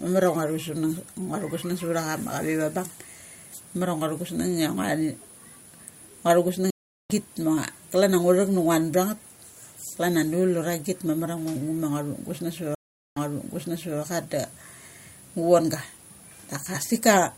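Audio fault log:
6.70–7.14 s and 12.75–14.00 s, stream reconnect: the connection dropped and the player went silent, for 0.39 s the first time and 0.42 s the second, then reconnected and started a new decoder partway through the stream. At 6.70 s the speech picks up roughly 0.4 s further on, so a short stretch is skipped, as with a live feed. At 12.75 s the server resent buffered audio, and speech resumes 0.84 s earlier, repeating that stretch.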